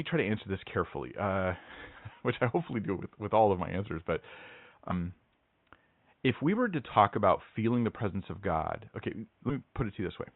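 At 4.91–4.93 s and again at 9.49–9.52 s, compressed frames are skipped: the speech jumps ahead, losing roughly 200 ms and then about 40 ms, consistent with 20 ms frames. On a spectrogram, harmonics break off abruptly.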